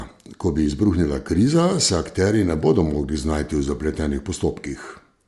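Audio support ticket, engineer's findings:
Breathy, grainy edge on the speech throughout, plainly audible; upper band sounds thinned and partly replaced by hiss-like texture. Likely cause: Bluetooth LC3 compression, the LE Audio transform codec. Coder zeroes weak high-frequency bins and fills them with noise. 7.5 ms frames; damage level consistent with a stream around 48 kbps.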